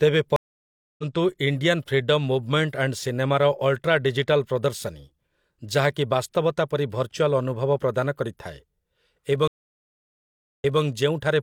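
Stream reconnects at 0.36 to 1.04 s (0.62 s gap, resuming roughly 0.7 s ahead) and 9.48 to 10.82 s (1.13 s gap, replaying 213 ms). Unlike a plain dropout, the speech jumps.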